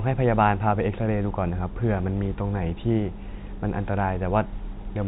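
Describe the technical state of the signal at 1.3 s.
At 1.3 s the signal is intact, with the speech carried cleanly through G.711 telephone coding, whose band stops at 4 kHz.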